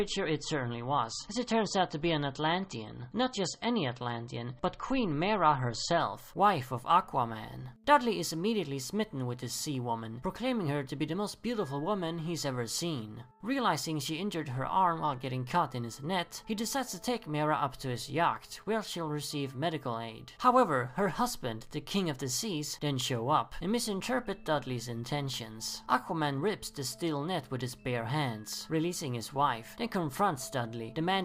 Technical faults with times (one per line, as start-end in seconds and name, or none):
0.00-6.00 adaptive stream starting at a low bitrate